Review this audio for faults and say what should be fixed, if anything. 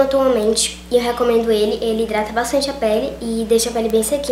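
Three bit error spikes appear, at 0.43 s, 2.18 s and 3.90 s. Each is a single sharp tick, peaking at about -11, -17 and -5 dBFS. A flipped bit throws one or two samples far off, then they return. Use error-checked storage and links.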